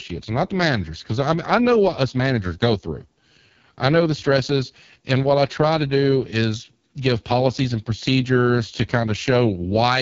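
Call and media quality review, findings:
AMR wideband (HD Voice) codec artefacts, whole clip. Speech rough, raspy, buzzy; band stops near 7.2 kHz. Heavy coarse pulse-model coding below 6.4 kHz, which fits the lowest 6.6 kbit/s mode. Unlike narrowband AMR, sibilance survives above 3.4 kHz, though as noise-like fill above 6.4 kHz.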